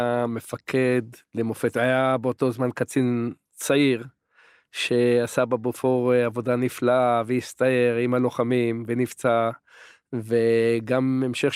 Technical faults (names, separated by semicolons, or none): none